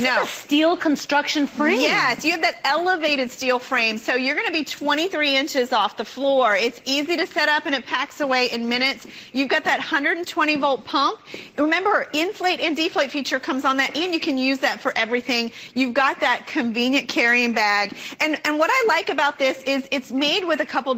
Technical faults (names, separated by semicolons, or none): none